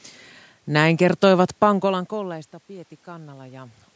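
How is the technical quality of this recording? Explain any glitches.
The recording has one audible fault. Automatic gain rising runs from 1.80 to 3.82 s. After the level drops by about 22 dB around 1.5 s, when the talker seems to move away, the gain control slowly adds about 4 dB. Voice and room noise swell together, and the waveform envelope and the spectrogram's noise floor brighten gradually rather than jumping.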